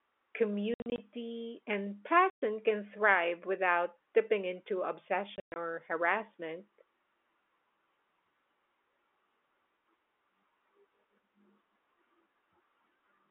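Three bursts of hard-edged holes chop the sound. From 0.74 to 0.98 s, about 140 ms drops out in scattered gaps, the longest 60 ms. At 2.3 s, a 120 ms hole falls just before "can thrive without tipping." From 5.36 to 5.56 s, between "thrive without tipping into" and "or harassment," about 160 ms goes, including one 120 ms run. This is packet loss filled with silence. The gaps step in units that fit 20 ms packets on the telephone-band G.711 line.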